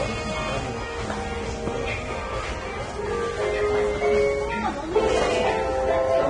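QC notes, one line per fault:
Throughout, Vorbis compression. Nothing is heard above 9.7 kHz. The remaining treble is hissy and grainy, tones sound rough, and attacks blur. This heavy damage likely comes from low-quality Vorbis coding near 23 kbps, which turns fine detail into noise.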